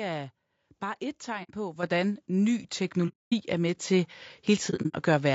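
The speech has a rough, grainy texture the whole way through, with a hiss-like fill between the harmonics and a top end that sounds thin and somewhat synthetic. That's likely low-delay AAC compression, the AAC-ELD flavour used for calls. Its short frames can't resolve pitch harmonics cleanly, and the damage here is plainly audible, which fits a low bitrate of around 32 kbps.

Right after "er bare et", from 1.43 to 1.50 s, there's the first AAC frame loss with muting. Roughly 60 ms of audio drops out. The decoder zeroed the missing frames, and the overlapping windows fade the sound down and back up, so you get a soft-edged hole.

At 1.83 s the microphone volume steps up by about 6 dB. The input gain was raised in a single jump, so the speech and the background get louder together. Another smaller step of about 2 dB comes at 2.85 s.

From 3.08 to 3.34 s there's a much longer muted gap of about 240 ms, ending just before "er med". 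Right after those words, at 3.87 s, the volume steps up again by about 2 dB.

The last frame loss runs from 4.70 to 4.95 s and sounds patchier than the others. About 150 ms goes missing in bits scattered across that stretch, so the sound flutters in and out, and the longest single dropout is around 70 ms.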